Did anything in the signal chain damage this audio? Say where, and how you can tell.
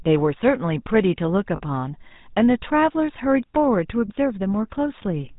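Yes. At the codec stage, the whole clip carries GSM full-rate codec damage, and it is plainly audible. The speech has a buzzy, gravelly texture, and nothing survives above 4 kHz, so sibilants sound dull. The codec rebuilds the voice from a vocal-tract model excited by regularly spaced pulses, keeping only one excitation sample in three, which produces that rough grain. The character fits the 13 kbps full-rate coder.

The network stage also shows lost GSM frames from 1.56 to 1.62 s. About 40 ms of audio is missing, which fits two dropped frames. Instead of a gap, the receiver repeated the last good frame's parameters, so the speech freezes into a brief rough, metallic ring. Because the outage is short, the concealment fills it without fading to silence.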